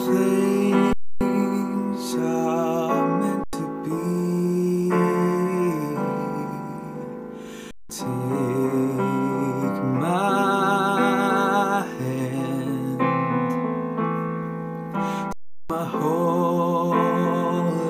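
The output buffer ran dry four times, an underrun with held sample each time, with three of the gap lengths fitting 4096-, 8192- and 16384-sample buffers. The converter froze on its last value, so the sound flattens into stillness at 0.93–1.21, 3.44–3.53, 7.71–7.90 and 15.33–15.70 s, then resumes, having skipped roughly 100 to 400 ms of audio.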